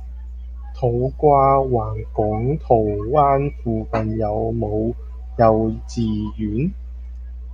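A ground loop or nearby transformer is coupling the 60 Hz power line into the signal path for the whole clip, producing mains hum. It sits as a steady low tone roughly 15 dB below the speech, audible beneath every phrase and in the pauses.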